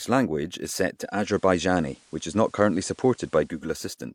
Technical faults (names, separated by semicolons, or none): digital radio blending to analogue